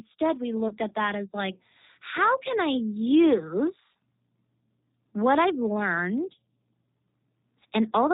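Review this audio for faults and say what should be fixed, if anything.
The whole clip carries G.729 codec damage, plainly audible. The speech is rebuilt from a vocal tract filter and pitch predictor, with nothing above 4 kHz, which fits G.729A at 8 kbit/s. Unlike simple band-limiting, the sound is also rough and synthetic. Prevent it by using a wideband codec such as G.722 or Opus.

From 0.68 to 0.74 s, VoIP packet loss was concealed by the speech codec. About 30 ms was missing, which fits a single lost packet. The decoder stretched the preceding sound and faded it out, and stayed weak briefly after recovery. A plain dropout would leave silence instead. Prevent it with jitter buffering, forward error correction, or QoS prioritisation of voice traffic.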